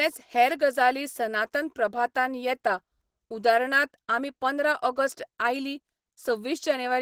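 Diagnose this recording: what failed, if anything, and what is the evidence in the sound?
Codec stage: likely Opus compression in hybrid mode, at a rate fitting 16 kbps, makes the speech hoarse, muffled and grainy throughout, though content extends to 22.2 kHz.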